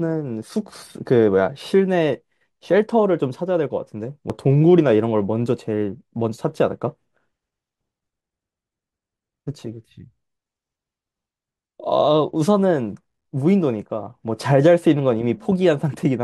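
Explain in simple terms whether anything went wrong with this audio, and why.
Yes, two things went wrong. At 4.30 s there is a tiny skip from an overlap between stream segments. The player trimmed a few milliseconds of real sound where two pieces, which fit 6-second segments, met. From 13.02 to 13.25 s, processor overload crackle appears. The processor missed about fifteen deadlines for short buffers of around 5 ms, leaving tiny silent gaps that sound gritty.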